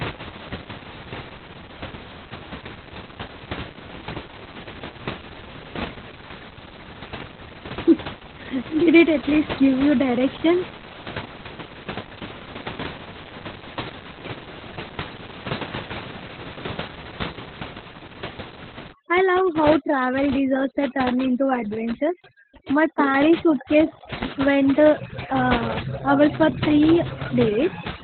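From the start to the end, the speech carries heavy Opus voice compression. The coder is in its speech mode and has cut the band to narrowband, so nothing is left above 4.3 kHz. The excitation is coded coarsely. Speech sounds muffled, hoarse and a little robotic. The room noise, about 12 dB below the speech, comes out as a burbling wash. The damage points to a very low bitrate, around 8 kbps.

At 18.93 s, overdone noise removal begins and lasts until the end, at 28.03 s. The noise reducer is set far too strong. It pushes down every band that falls near its estimate of the noise. Quiet parts of the speech are removed along with the room noise. The pauses drop to near silence, with small twinkling specks.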